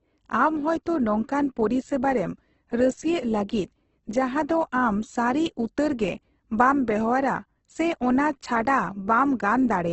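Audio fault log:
throughout Opus compression: the speech sounds heavily rough and grainy, with noise-like texture in place of clear detail and nothing above 8.2 kHz. The likely cause is Opus in music mode, which keeps each band's energy but fills bands with folded or noise content, consistent with a wideband stream near 12 kbps.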